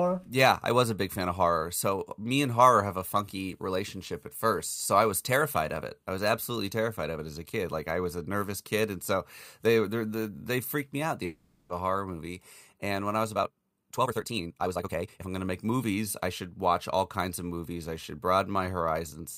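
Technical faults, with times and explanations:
11.25–11.70 s, long network dropout: audio likely stopped arriving for about 0.44 s, and the receiver filled the entire gap by extending the last sound, so the speech gives way to a fading continuation rather than silence, then resumes with that stretch missing.
13.33–15.27 s, time-stretched section: software likely squeezed this passage to play at 1.99 times its pace, dropping short slices to hold pitch steady, so the speech abruptly runs nearly twice as fast, sounding rushed while its pitch stays unchanged.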